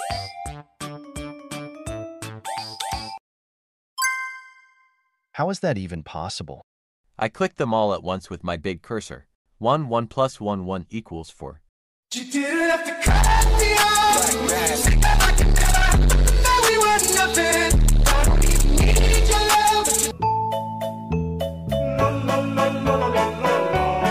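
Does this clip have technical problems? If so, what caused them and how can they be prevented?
No, there are no technical problems to report in this clip. Nothing needs to be traced to a cause or prevented.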